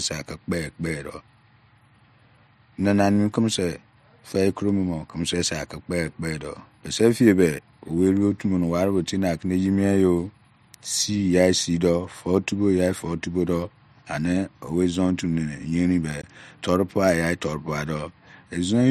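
A block of digital silence cuts into this speech recording from 16.22 to 16.24 s, just before "toiupueiya torupua". For 20 ms the sound cuts out with no fade. This points to an output buffer that was not filled in time.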